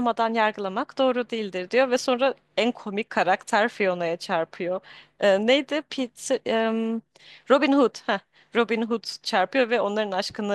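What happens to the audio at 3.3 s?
Nothing goes wrong at 3.3 s; the speech carries on intact through that moment, with no dropout, click or distortion.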